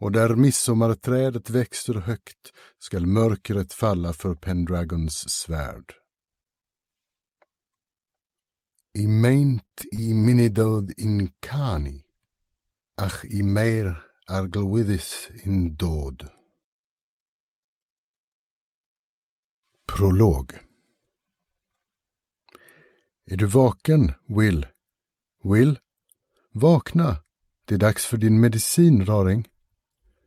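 At 9.65 s a short stall from a late packet holds the sound for 60 ms, until 9.73 s. The jitter buffer ran dry, so the last sound is stretched with a faint buzz, then resumes where it stopped. Nothing is skipped, which separates it from a loss.

Two short concealed packet losses follow, at 9.81 to 9.84 s and 9.96 to 10.00 s. Here 20 ms and then 40 ms of audio never arrived, and the receiver filled only part of each gap with extrapolated sound. The result is a brief smear or wobble with a little content actually gone, unlike the stall.

From 9.98 s a call bitrate drop cuts the encoder from 64 to 24 kbps, staying at the floor for about 4.2 s until 14.23 s. The coarser coding makes the sound rough and duller in the top end. It is a sustained change in texture, not an isolated glitch.

Inside that stretch, from 13.34 to 13.70 s, a jitter buffer speed-up plays the audio at 114% speed. It trims roughly 50 ms of pitch-period slices to shrink the backlog. 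The sound hurries but keeps its pitch, which distinguishes it from a resampling error.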